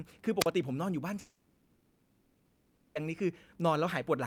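Speech with two faults. At 0.39 to 0.47 s a wireless microphone squelch dropout briefly raises static, then the receiver mutes the signal for about 38 ms before the voice returns. From 1.19 to 2.97 s, 1.76 s of speech is replaced by a synthetic buzzy continuation of the previous sound, likely a long network dropout concealed by the receiver, and the missing audio never resumes.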